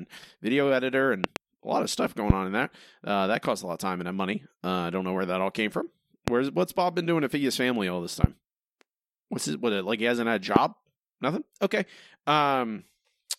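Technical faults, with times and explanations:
1.24–1.39, 2.30–2.33, 6.28–6.30, 8.24–8.26, 10.56–10.59 s: loud pop. Sharp clicks jump out of the speech, roughly 20 to 25 dB above it, while the speech carries on beneath. The first, after "video editor" and before "a lot of stuff", is a double pop. The others are single, and two of them follow "his family all this" and "he hasn't had a". The likely cause is a voltage spike from a switch, static or a driver glitch. On a waveform each shows as a tall narrow spike, and on a spectrogram as a bright vertical line across all frequencies.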